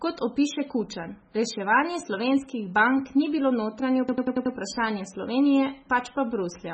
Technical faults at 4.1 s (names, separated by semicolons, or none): MP3 compression; system hang loop